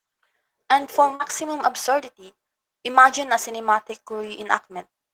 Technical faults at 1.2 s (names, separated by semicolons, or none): short concealed packet loss